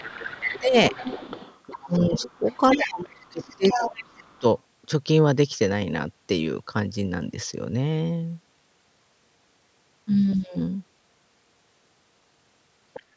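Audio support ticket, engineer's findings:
Speech suppressed in double talk, three stretches. 0.0 to 0.94 s: level dips by up to about 15 dB, roughly half a second affected. 1.8 to 2.43 s: dips of up to about 20 dB. 2.75 to 4.44 s: worst, down by up to about 30 dB, around a second lost in pieces. Likely the echo canceller's suppressor. Both ends talking together, so it could not split near speech from loudspeaker echo. It attenuated everything.

Other side's voice leaking through, four spots. 0.04 to 0.6 s and 0.91 to 3.98 s: a second voice about 10 dB under the talker. It overlaps the suppressed stretches. 4.29 to 4.39 s: faint scrap, about 40 dB down. 12.94 to 13.02 s: brief fragment, about 20 dB down. Likely residual echo the canceller failed to remove. The far end plays on the loudspeaker and re-enters the microphone. Band tops out at 8 kHz, low bass trimmed by the call high-pass.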